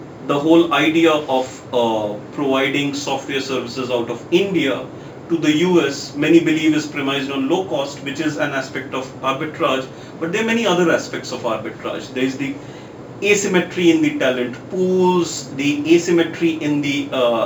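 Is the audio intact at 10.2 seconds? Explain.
No. At 10.2 seconds, as throughout the clip, a fine hiss and roughness rides on the sound, thickening on loud, bright passages and vanishing in silence. This is sample clock jitter: timing wander of roughly 3 microseconds makes sampling errors, about 35 dB below the signal, that grow with waveform slope.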